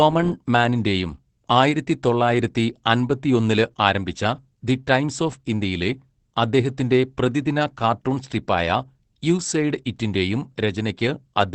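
Across the whole clip the speech sounds muffled, slightly hoarse and faintly robotic, with nothing above 8.5 kHz. This is Opus voice compression in its wideband SILK mode, coding the excitation coarsely at a low bitrate, which fits roughly 12 kbps.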